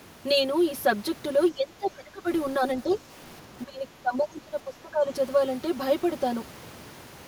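Channel delay (comb filtering) runs through the whole clip. One channel lags the other by roughly 5 ms before the mix to mono. Cancellation carves fixed notches, the first near 100 Hz, then evenly up the spectrum. The speech sounds hollow and phasey.

From 1.51 to 2.27 s the speech sinks sharply, by something like 25 dB at its lowest. This is speech suppressed in double talk. The likely cause is an echo canceller turning everything down while both sides talk at once.

Between 2.91 and 2.95 s a brief scrap of a second voice slips through, around 25 dB below the main speech. This is the other side's voice leaking through, likely from a loudspeaker echo that the canceller left behind.

From 3.65 to 5.08 s the speech is suppressed in double talk again, for about a second and a half. The deepest dip is about 20 dB.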